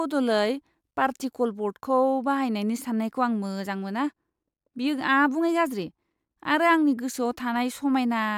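Listening through the speech from beginning to end, nothing stood out as a technical problem at any point.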